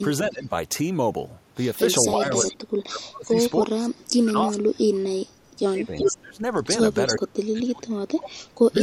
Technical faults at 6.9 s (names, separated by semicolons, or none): echo leak